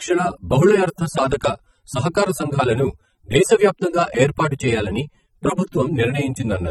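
From start to finish the speech sounds dull and smeared, with a warbling, fizzy edge on sibilants and held sounds. This is likely AAC compression, where the encoder drops the upper band and thins the spectrum, damage that fits a low bitrate near 24 kbps.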